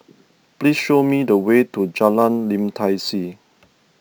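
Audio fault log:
throughout, crude rate conversion: the speech was raised to a higher rate by repeating the nearest samples without filtering, which fits a 32 kHz to 44.1 kHz change. This leaves an inharmonic fizz about 30 dB down that follows loud, bright syllables, unlike steady hiss.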